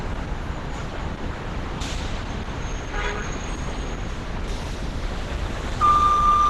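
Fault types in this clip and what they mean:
Opus compression: Throughout, the sound is muffled and hoarse, with a rough, grainy texture and nothing above 12 kHz, so the top octave is simply missing. This is likely a low-rate Opus encode, consistent with about 12 kbps. At that rate the encoder runs in its hybrid mode, coding the lower band with its speech-oriented layer and the upper band sparsely. Heavy detail is lost, with noise filling in the upper band instead of leaving audible gaps.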